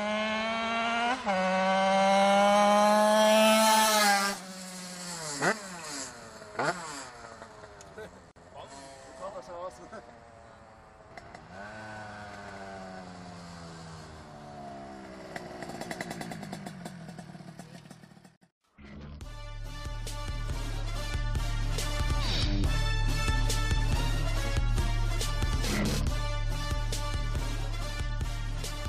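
A gap at a join of encoded pieces opens at 8.31 to 8.36 s and again at 18.36 to 18.42 s, ten seconds apart: silences of about 48 and 54 ms where separately encoded segments were butted together with their start-up delay and end padding left in, so the sound drops out and resumes where it stopped.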